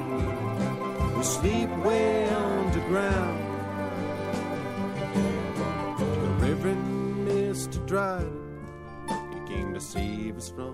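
No technical faults are audible.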